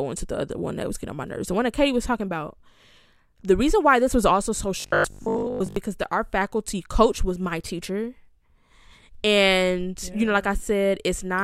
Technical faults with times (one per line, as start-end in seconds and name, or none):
4.80-5.76 robotic sound from repeated short buffers